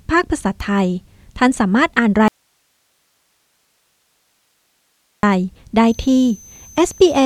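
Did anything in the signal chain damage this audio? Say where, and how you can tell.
Yes, two faults, in two different stages.

From 2.28 s to 5.23 s the sound vanishes abruptly for about 2.95 s and leaves only hiss, roughly 50 dB below the signal, before cutting straight back in. That is an audio dropout to a faint residue. The hard edges rule out a pause or fade, and the steady hiss shows the path after the break stayed live. The wanted signal was likely lost upstream, at an intermittent analogue connection or a stalled feed.

From 5.88 s to the end, a thin high whistle rides in, its pitch wandering between 6.13 and 6.21 kHz at about 30 dB below the signal. This is a switching supply whistle from the analogue power stage. A switch-mode supply is dropping into an audible burst mode or beating against another supply, and its drifting pitch follows the changing load.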